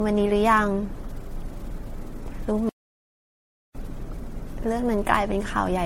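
Speech runs throughout with a swirly, hollow, smeared character, and consonant attacks are blurred more than a single lossy encode would cause. That points to generation loss: the sound likely went through lossy encoding and decoding around seven times, with each pass requantising on a shifted frame grid so the noise and spectral holes pile up. The texture fits repeated MP3 coding at about 64 kbit/s, and nothing is present above 16.5 kHz. There is also a playback stall from 2.69 s to 3.75 s, a gap of 1.06 s in which the output drops to silence mid-flow before the speech carries on. The player was likely starved of data or its thread was blocked, so it had nothing to output until it recovered.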